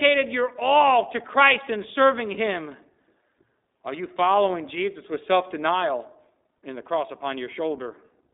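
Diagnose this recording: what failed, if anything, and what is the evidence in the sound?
The failure is at the codec stage, where the iLBC codec was applied throughout. The speech has a telephone band of roughly 250 Hz to 3.7 kHz, with nothing above 3.8 kHz. The coding damage is plainly audible as a rough, slightly synthetic grain on the speech. iLBC codes each frame's excitation independently, here in blocks that fit 20 ms frames. The sound points to its 15.2 kbps mode.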